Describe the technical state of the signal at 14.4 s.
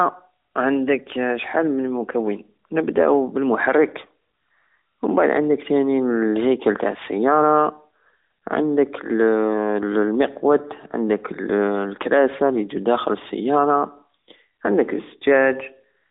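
At 14.4 s the speech is intact, with no dropout, click, distortion or other fault, only the narrow telephone band of the AMR narrowband mobile codec carrying it.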